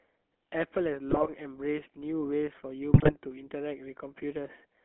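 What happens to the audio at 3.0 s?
From 2.94 to 3.18 s, GSM bit errors corrupt the decoder's filter, pitch and gain values. The speech breaks into squawks, pops and gargling. On a spectrogram, frame-sized blocks show smeared or misplaced formants and sudden level jumps. The damage fits roughly nine frames and an error rate of a few percent.

Underneath lies the GSM full-rate codec, which fits a 13 kbps stream. It rebuilds speech from a vocal-tract model driven by sparse, regularly spaced pulses. That gives a plainly audible buzzy, gravelly roughness. A spectrogram shows energy confined to about 250 Hz to 3.4 kHz, with nothing above.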